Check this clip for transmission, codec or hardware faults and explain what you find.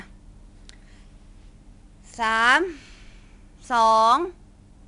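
There is one fault, present for the whole speech clip: a gritty hiss rides on every louder passage and swells and fades with the level, with roughness on sharp onsets and no content above 10.7 kHz. This is 4-bit ADPCM compression. Each sample is coded as a small step from a predicted value, so the error grows with the signal and smears fast attacks. The dull top and the grain point to a data rate around 89 kbps.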